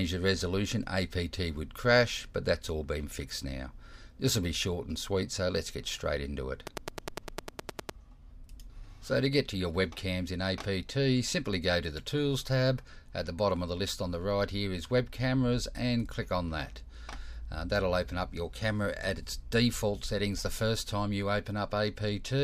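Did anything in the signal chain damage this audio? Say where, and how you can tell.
Yes. A train of clicks runs from 6.67 to 7.90 s: roughly fifteen near-identical sharp pulses at a regular rate of about 9.8 per second, peaking about 15 dB above the surrounding audio and audible as steady ticking over the sound. The uniform shape and metronomic spacing suggest an external periodic source rather than the programme. The likely stage is the analogue wiring or interface, where nearby equipment or a faltering connection couples a repeating pulse into the signal.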